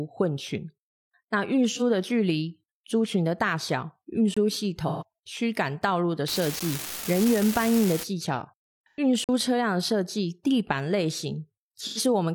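At 1.69 to 1.82 s, AAC frame loss with concealment smears the speech into a brief noisy, phasey patch. The decoder rebuilt a missing frame from the last good spectrum. At 4.34 to 4.37 s, a block of digital silence cuts the sound dead for 23 ms, which fits a 1024-sample buffer that was not filled in time. Concealment returns at 4.87 to 5.03 s, longer. From 6.28 to 8.03 s, an unreliable data bit adds a steady crackling fizz, even in pauses. Each wrong bit makes an equal spike. A shorter silence block at 6.60 s, about 12 ms, gives a single tick. Concealment smears 8.89 to 8.99 s. A 46 ms hole at 9.24 to 9.29 s cuts out and back with no fade. A final concealed patch sounds smeared and phasey at 11.81 to 11.99 s.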